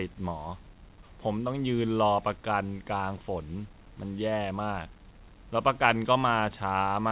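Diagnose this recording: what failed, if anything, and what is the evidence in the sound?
Nothing failed in this recording: the speech comes through the call path as expected, its sound ending at about 4 kHz as a narrowband call codec would leave it.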